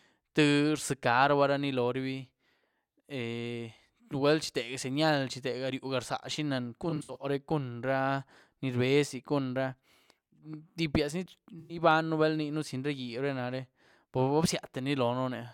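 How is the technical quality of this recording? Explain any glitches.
The speech has two brief dropouts of the same kind. AAC frame loss with concealment occurs from 6.90 to 7.17 s and again from 11.60 to 11.77 s. The decoder lost compressed frames and filled each gap by reusing the last good spectrum. In the first patch, about 150 ms went missing in bursts spread over 256 ms, the longest run near 70 ms. The second patch lost about 107 ms. Both sound like a smeared, noisy or phasey patch rather than silent.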